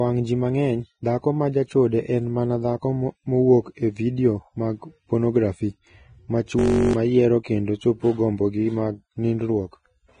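Vorbis compression throughout: nothing above 9.7 kHz, with heavily grainy, hissy treble and roughened tones, likely from low-bitrate coding around 21 kbps that quantises fine detail into noise.

System hang loop from 6.59 to 6.93 s, just before "yiero kendo chopo gombogi": a 21.33 ms slice repeats 16 times, a steady buzz at 46.9 Hz that fits a 1024-sample buffer, replacing roughly a third of a second of audio.

Pre-echo at 7.43 s, before "kendo chopo gombogi mag": codec noise spreads about 19 ms ahead of a sharp attack, giving a brief hiss and a softened onset.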